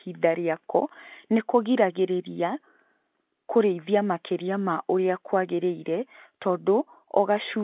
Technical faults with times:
none

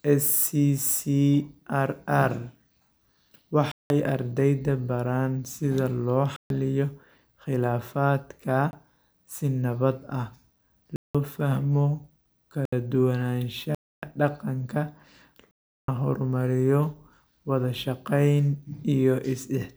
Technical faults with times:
3.72-3.90 block of digital silence
6.36-6.50 block of digital silence
8.71-8.73 block of digital silence
10.96-11.15 block of digital silence
12.65-12.72 block of digital silence
13.75-14.02 block of digital silence
15.51-15.88 block of digital silence

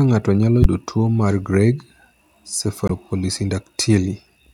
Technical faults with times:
0.62-0.66 damaged data in a compressed stream
2.86-2.91 damaged data in a compressed stream

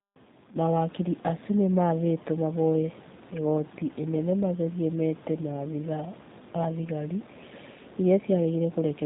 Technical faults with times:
0.00-9.05 G.729 codec

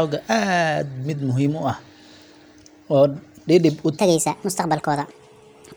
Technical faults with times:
3.98-5.76 section at the wrong speed

